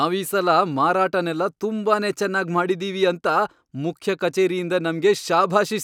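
No technical faults occur at any point, so there is nothing to describe in time order.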